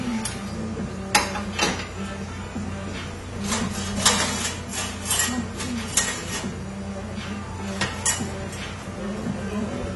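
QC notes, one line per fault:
Throughout: AAC compression, likely AAC-LC at a low bitrate. The cut-off is lowered, so the top end is cut away and the sound is dull. Codec damage is plainly audible. The cut-off and coarse quantisation fit a rate around 32 kbps.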